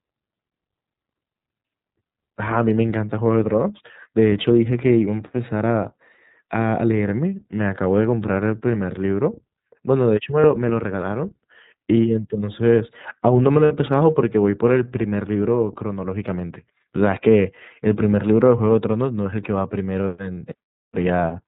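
The audio is speech sent through the iLBC codec, a narrowband VoIP coder that handles each frame on its own, and the sound fits its 30 ms-frame mode at about 13 kbps. Everything above 4 kHz is gone, so the speech sounds band-limited and muffled. The coding damage is plainly audible as a rough, slightly synthetic grain across the whole clip. There are also lost iLBC frames at three points: 10.4 s (a gap of about 30 ms), 13.65 s (about 60 ms, roughly two frames' worth) and 20.35 s (about 30 ms). At each loss the decoder has nothing to play, so it repeats the last pitch cycle blended with noise, and you hear a brief held, buzzy or breathy vowel. The 13.65 s gap is the longest. Because each iLBC frame decodes independently, the voice comes back cleanly right after each gap.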